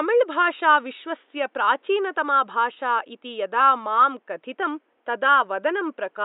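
Nothing goes wrong in this bit of speech; the only thing besides the talking is a faint background of room noise sitting about 46 dB below it, which is just the space the microphone was in.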